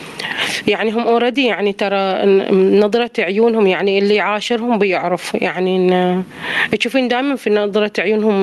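Gain pumping runs through the whole speech clip: the gain ducks by around 25 dB under each loud syllable. Loud and quiet passages sit squashed together, likely from gain set far too high with a fast limiter clamping it back.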